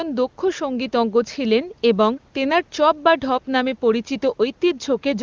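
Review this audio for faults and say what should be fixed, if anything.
Nothing here needs fixing; no faults can be heard.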